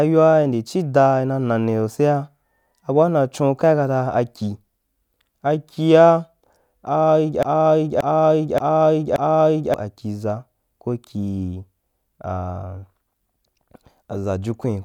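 From 7.43 to 9.74 s the speech falls into a broken-record loop: a 0.58 s fragment plays four times back to back, likely from a stalled player or stream resending its last buffer. On a spectrogram or waveform, identical blocks tile the span, and the speech that belonged there is missing.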